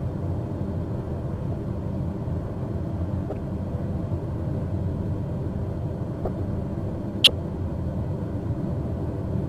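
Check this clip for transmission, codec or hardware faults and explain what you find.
There's a recurring codec problem: corrupt frame decoded, four times, at 1.52–1.56 s, 3.30–3.35 s, 6.25–6.28 s and 7.24–7.30 s. Each time a handful of damaged compressed frames got played as if valid, so scrambled gain and spectral values dump energy where it doesn't belong. You hear short chirpy, noisy blips of a few tens of milliseconds, and they get louder through the clip, the last peaking around -5 dBFS.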